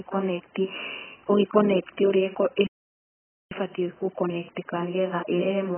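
The speech is dull and smeared throughout, with nothing above about 3.1 kHz, which points to heavy AAC compression, likely AAC-LC at a very low bitrate of roughly 10 kbps. From 2.67 to 3.51 s the sound cuts out for about 0.85 s, likely a playback stall where the player ran dry. From 3.51 s to the end there's time-compressed catch-up. The speech hurries along at about 1.15 times normal speed without a pitch shift.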